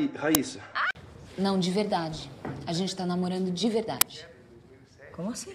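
Two uninitialised buffer bursts, at 0.35 s and 4.01 s, play leftover memory as loud digital noise. They show as thin waveform spikes and broadband spectrogram stripes, about 3 ms and 6 ms long, fitting 128- and 256-sample blocks.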